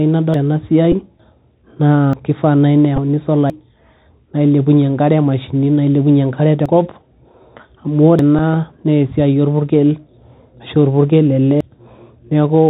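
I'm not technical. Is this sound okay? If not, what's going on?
No, it's not quite okay. There are three separate things going on.

The whole recording has that Bluetooth CVSD headset codec sound, the old phone-call mode headsets use. Everything above about 4 kHz is cut off, so it's muffled. The s sounds come out scratchy and there's a grainy hiss underneath the speech the whole way through.

Then there are seven dropped buffer (overrun) moments, at 0.34, 1.2, 2.13, 3.5, 6.66, 8.19 and 11.61 seconds. Each is a spot where the speech suddenly jumps ahead, skipping somewhere between a tenth and a third of a second. Most likely the computer didn't collect the audio in time and it got overwritten.

Finally, there are two short Bluetooth headset packet repeated glitches, from 0.92 to 0.94 seconds and from 2.96 to 2.99 seconds. A few of the tiny chunks the headset sends got lost, about 11 ms' worth each time, which points to three packets. 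The last chunk was replayed in their place, so you hear a brief buzzy blip.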